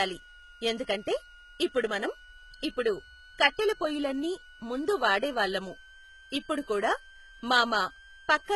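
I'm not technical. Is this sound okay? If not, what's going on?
No. Two problems run through the whole recording.

First, a thin, steady whistle sits behind the speech from start to finish, pitched at roughly 1.5 kHz, a bit like a faint kettle. Its pitch wanders slightly, between about 1.4 and 1.6 kHz. This is a switching supply whistle: the kind of power adapter or charger that switches on and off very quickly can end up doing so at a rate you can hear, and that buzz leaks into the audio as a tone.

Second, the speech itself sounds heavily processed. The high, crisp parts, especially s sounds, come across gritty and metallic, as if the top end were made of something synthetic. That points to HE-AAC compression, likely at a very low quality setting. To save space, this format stores only the lower part of the sound and fakes the treble by copying lower parts upward, so the brightness is there but no longer matches the real voice.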